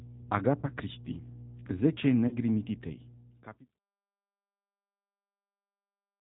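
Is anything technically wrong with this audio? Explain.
Yes, there are three faults. A mains hum runs throughout. It is a steady 60 Hz tone, roughly 15 dB below the speech, from power-line coupling such as a ground loop.

The speech also passes through the G.729 codec at 8 kbit/s. It rebuilds the voice from a filter and sparse pulses, so nothing above 4 kHz survives. The sound is plainly rough and synthetic.

VoIP packet loss concealed by the speech codec occurs at 0.60–0.69 s and 2.28–2.37 s. Each gap is about 30 ms, which fits one lost packet. The decoder extrapolates and fades, leaving a brief, weakened stretch.

The speech then fades smoothly out by 3.8 s.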